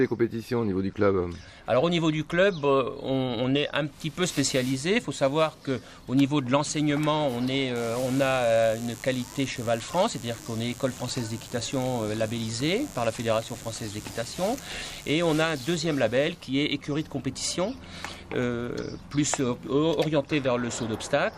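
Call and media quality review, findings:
Mains buzz, 7.76 to 15.76 s. Steady raspy buzz, about 20 dB below signal, 50 Hz base. Probable source: dimmer, rectifier or unshielded cable coupling switching spikes into the path, two per mains cycle (100 per second), harmonics of 50 Hz reaching several kHz.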